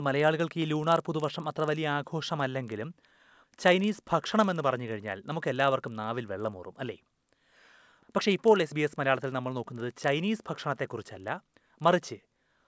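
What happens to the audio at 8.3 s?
At 8.3 s the speech carries a steady ticking at 25 Hz, the mark of a resampler restarted on every block. This fault runs through the whole clip, not just this moment. The conversion from 48 kHz down to 16 kHz was done in separate 40 ms chunks. At each chunk edge the converter lacked the true neighbouring samples. That leaves a small error every 40 ms. It sounds like a low buzz riding on the speech, present only while there is signal.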